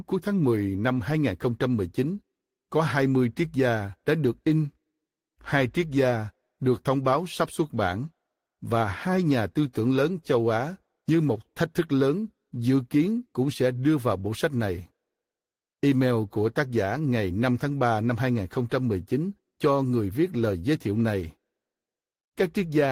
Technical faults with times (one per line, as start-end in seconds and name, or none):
none